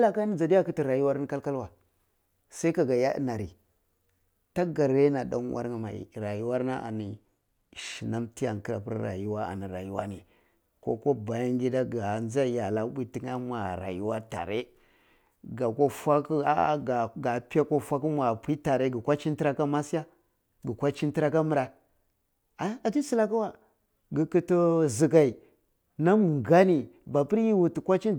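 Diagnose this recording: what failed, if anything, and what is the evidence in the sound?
Channel delay (comb filtering) occurs at the driver or buffer stage from 6.55 to 7.94 s. One channel lags by about one sample, then both sum to mono. Cancellation starts near 20 kHz. The speech loses some top-end air and sounds slightly dull.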